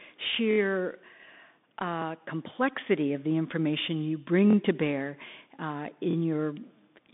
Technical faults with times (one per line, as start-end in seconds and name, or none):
0.00-7.13 Bluetooth CVSD headset codec
0.51-0.58 repeated buffer
4.50-4.55 repeated buffer
6.11-6.15 repeated buffer